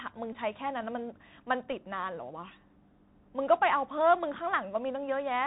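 The Bluetooth CVSD headset codec runs throughout. Its adaptive one-bit coding cuts everything above 4 kHz, leaving a hard ceiling on the spectrogram, with scratchy sibilants and granular hiss. A Bluetooth headset packet repeated at 0.33–0.35 s, 1.71–1.73 s and 4.86–4.88 s re-decodes stale bits, giving brief 267 Hz buzzes that show as periodic vertical striations. The lost spans are 15, 11.2 and 18.8 ms, which fits runs of four, three and five repeated 3.75 ms packets.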